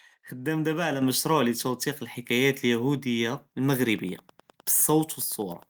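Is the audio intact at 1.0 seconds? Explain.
No, right around 1.02 s there's a microphone volume step-up: the input gain got bumped by about 6 dB in one go, so voice and background jump louder together.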